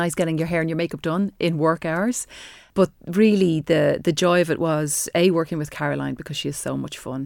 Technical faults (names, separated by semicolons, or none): none